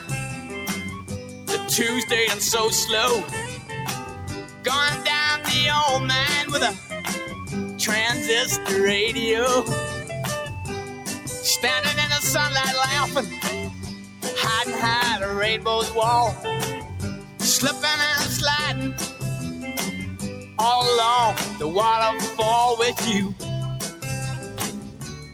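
A speech-tuned noise suppressor has been left running on this sound, treating sustained tones and tails as noise, so levels pump and thin out by something like 10 dB. Sound cut by the noise suppressor shows up as dips of about 5 to 9 dB at 0.0–1.49, 3.46–4.65, 6.74–7.47, 10.86–11.28, 13.7–14.25, 16.81–17.41, 20.15–20.58 and 23.34 s to the end, where held material sinks and decays get clipped short.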